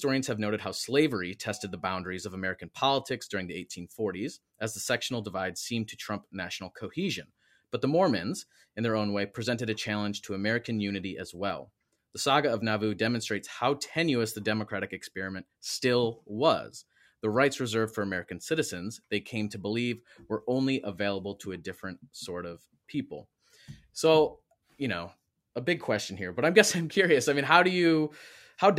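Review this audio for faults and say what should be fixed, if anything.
No faults found in the speech recording, so nothing needs fixing.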